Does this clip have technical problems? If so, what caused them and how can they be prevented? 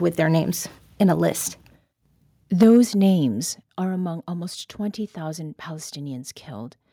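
Yes. From 2.61 to 2.78 s, just before "names are among almost", the loudest speech peaks show microphone overload: they run about 6 dB past full scale and their tops are flattened, with roughly a tenth of the samples in that stretch clipped. The flat-topped waveform adds a harsh, crackly edge to the syllable. The likely cause is an input gain set so high that the converter runs out of headroom on loud speech. Setting the input gain so normal peaks sit well below full scale would prevent it.

The level also drops in two sudden steps, a sign of the microphone volume being stepped down. At 2.63 s, inside the distorted peak and again just before "names are among almost", voice and background fall by about 3 dB together. At 3.63 s, just before "are among almost", they fall again by about 7 dB. This is likely the call software reacting to the overload by cutting the device's input volume in single jumps. 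Disabling automatic microphone gain adjustment and fixing a sensible level in advance would prevent it.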